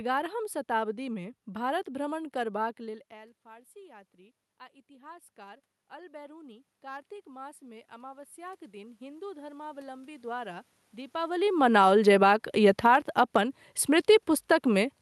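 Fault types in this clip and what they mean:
automatic gain rising: The gain control heard the input drop by about 24 dB after the talker moved away, just after "शताब्दीमे भारत भ्रमण करबाक". From 2.83 s to 10.37 s it slowly raised its gain by about 15 dB. The voice and the room noise swell together.
automatic gain falling: After the talker moved near 11 s, the input grew too loud. The gain control pulled its gain down by about 6 dB from 11.32 s to 11.94 s, then by about 4 dB from 12.64 s to 13.15 s. Voice and background sink together.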